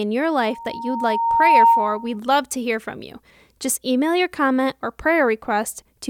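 From 0.40 to 2.18 s a loudspeaker feedback squeal builds over roughly a second: a 926 Hz tone where mic-to-speaker loop gain exceeds unity, peaking about 10 dB above the speech.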